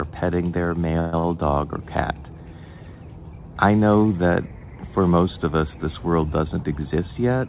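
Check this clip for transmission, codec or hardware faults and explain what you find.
Two timing faults occur close together, over a band-limited call path with nothing above 4 kHz, which fits G.711 mu-law at 64 kbps.

From 0.99 to 1.15 s there is a call audio freeze. Packets were likely held in transit and the jitter buffer ran dry, so the last sound carries on as a fading buzz or hiss for about 130 ms. On a spectrogram this appears as smeared, repeated horizontal bands. The audio then resumes where it stopped.

From 1.19 to 1.25 s a short stall from a late packet stretches the last sound by about 50 ms. It is heard as a held instant with a slight buzz or dip, and on the waveform it shows as a brief repeated stretch.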